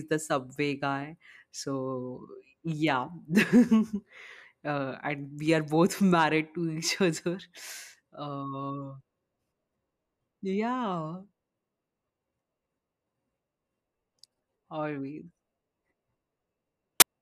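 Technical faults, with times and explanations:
17.0 s: file tags played as audio. Near the end of the clip the player runs past the sound data into a block of embedded compressed data, most likely the cover picture, and reads those bytes as samples. Compressed image data is close to random, so it decodes as very loud white noise. The result is a very short, very loud burst of static, about 18 ms long, with hard edges where it starts and stops abruptly.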